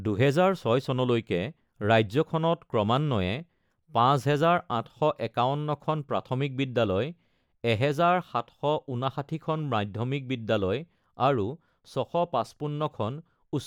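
A speech recording with nothing technically wrong that can be heard, so there are no times or causes to give.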